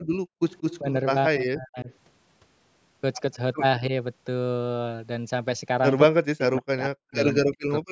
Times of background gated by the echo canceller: 0.00-0.41

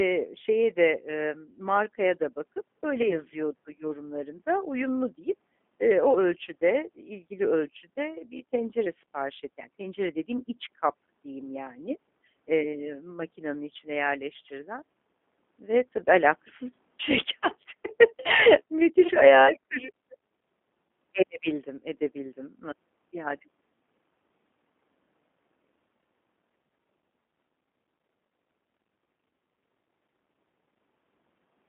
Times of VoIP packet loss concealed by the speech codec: 3.02-3.19, 19.08-19.11

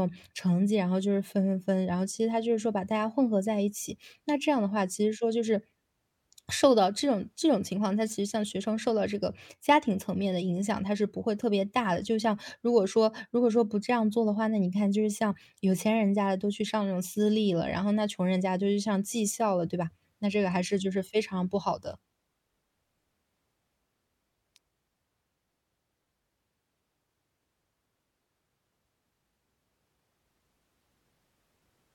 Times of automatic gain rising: none

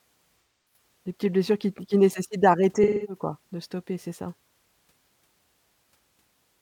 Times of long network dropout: none

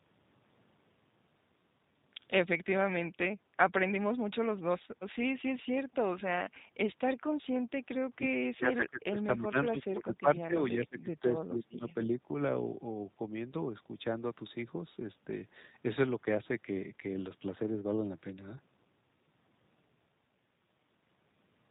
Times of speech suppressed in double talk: 8.06-8.25, 8.54-12.08

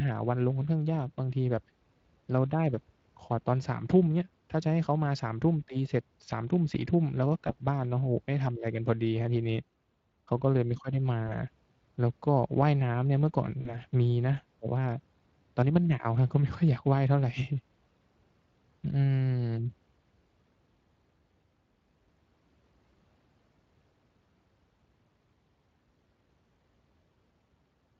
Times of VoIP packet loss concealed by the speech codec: 7.47-7.55, 11.27-11.32, 13.61-13.78

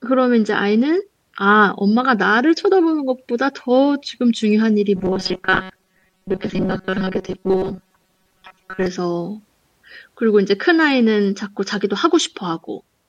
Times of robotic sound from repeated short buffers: 4.96-8.87

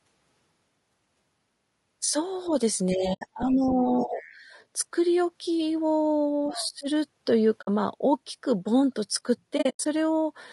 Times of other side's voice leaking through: 3.49-3.69, 4.16-4.31, 6.51-6.68

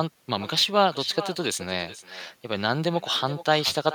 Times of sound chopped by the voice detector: none

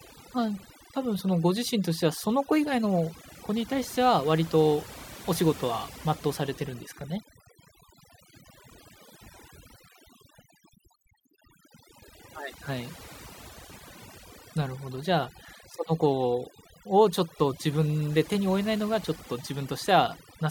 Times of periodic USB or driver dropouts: none

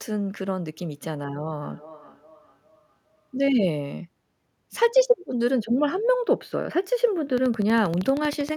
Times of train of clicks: 7.38-8.50

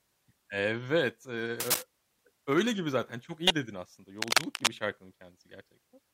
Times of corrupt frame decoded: 3.47-3.51

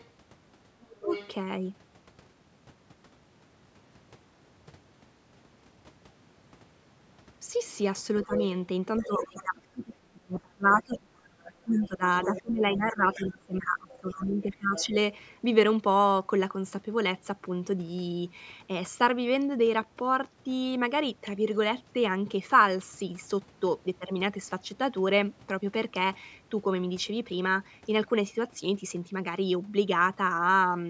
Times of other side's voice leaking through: 0.00-1.28, 8.23-9.42, 10.72-14.85

